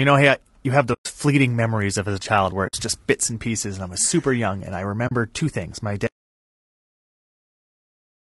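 Throughout, the speech sounds rough and grainy, with noise filling the gaps between harmonics and a thin, artificial top band. This is low-delay AAC compression, likely AAC-ELD at a bitrate around 32 kbps. Its short frames resolve pitch harmonics poorly, and at this rate the damage is plainly audible.

Short soft-edged holes come from AAC frame loss with muting. They fall at 0.93 to 1.06 s, about 120 ms, between "hey I you have" and "fleeting memories of as"; at 2.67 to 2.74 s, about 60 ms, after "as a child where" and before "just bits and pieces"; and at 5.07 to 5.12 s, about 40 ms, after "super young and I" and before "two things". The decoder zeroed the missing spectrum, and the overlapping windows fade the sound out and back in.

From 6.07 s to the end, an audio dropout to silence cuts the speech off abruptly and never recovers. Unlike the faded codec gaps, this is silence with no room tone, most likely because the input was lost while the recorder kept writing silence.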